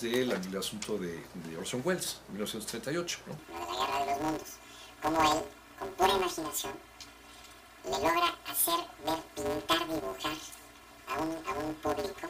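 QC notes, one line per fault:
3.39–12.30 s, planar audio read as interleaved: from 3.39 s to the end, each 5.8 ms block, which fits a 256-sample block, has its separate channel halves read as alternating pairs, so each half plays squeezed to double speed and then the next half follows. The blocks are this short, so there is no clear octave shift. Instead a robotic buzz sits at the 172 Hz block rate. On a spectrogram this shows as a 172 Hz comb of harmonics, and the waveform shows a regular seam every 5.8 ms.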